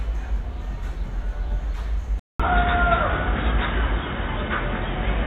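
Input switched to a poorer device, from 2.2 s to the end: after a gap of 200 ms, the sound turns dull and boxy, with nothing above 3.8 kHz, a level shift of around 5 dB and new background noise sitting roughly 35 dB below the signal. This points to the recording system likely having moved its input to a narrower-band microphone or headset path, bringing its own tone, gain and noise floor.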